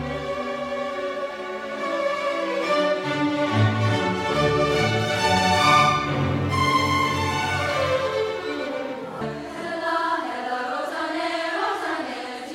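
A second copy of the audio was likely mixed in from a slower capture path or an out-of-step edit, giving a doubled audio track from 5.37 to 9.25 s. A dry, full-band repeat trails about 150 ms behind, roughly 5 dB quieter, switching on and off abruptly.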